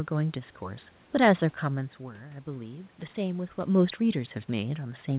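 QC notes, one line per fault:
No fault found, so there are no QC lines to give.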